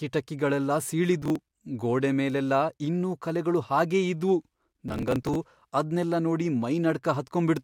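Processor overload crackle breaks up this speech recording from 1.22 to 1.61 s, just before "ಗೋಡೆ ಮೇಲೆಲ್ಲ ಇನ್ನೂ ಕಲೆಗಳು", and again from 4.88 to 5.35 s, right after "ಇನ್ನೂ ಕಲೆಗಳು ಹಾಗೇ ಇದ್ವು". In each burst, audio blocks that weren't processed in time are simply dropped, leaving rapid hard-edged gaps heard as gritty tearing. The spacing suggests buffers of roughly 5 ms, with about ten missed in the first burst and about thirty in the second.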